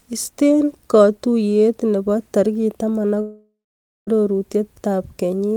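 At 3.21 s, right after "katuiyet nebo tarik taman", the speech turns into a buzzy, smeared continuation of its last sound that fades away, leaving about 0.51 s of silence before audio resumes at 4.09 s. Around 0.86 s of speech is simply gone. This points to a long network dropout, likely caused by incoming audio stalling while the receiver stretched the final fragment. A brief packet loss would only blip, without this fade into dead air.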